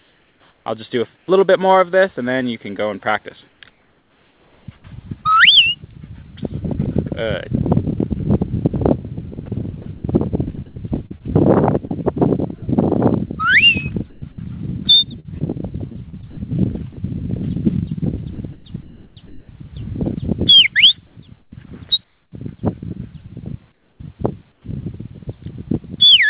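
The audio is band-limited, with nothing above 4 kHz, which fits a G.711 mu-law call path. Comfort noise in place of the background appears at 0.0–1.28 s, 3.48–4.68 s, 21.07–22.32 s and 23.72–24.64 s. The real background gives way to a steady, featureless hiss. The likely cause is discontinuous transmission: the sender stopped sending and the receiver synthesised noise. Sound chopped by the voice detector occurs at 9.46–12.62 s, 14.1–14.38 s, 15.2–16.97 s and 18.35–19.49 s. Quiet parts drop into synthetic noise and then return, so the sound stutters. This is likely the detector switching transmission on and off.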